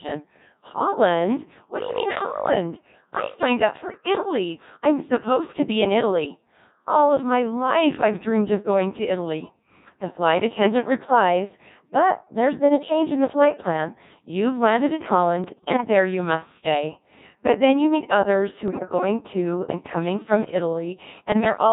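Throughout, the speech has the robotic, buzzy character of a Codec 2 vocoder, consistent with a heavily squeezed mode around 1.6 kbit/s. Only pitch, voicing, energy and spectral envelope survive, and the decoder rebuilds the voice from sine waves rather than the original waveform.

Bit errors on digital voice radio break through at 3.83–3.97 s, 15.44–15.84 s, 18.68–18.83 s and 21.32–21.58 s. Corrupted parameters knock whole frames off course, causing sudden pitch, level and timbre jumps that turn into warbling, bleepy gibberish. The 18.68 s burst has the heaviest error rate.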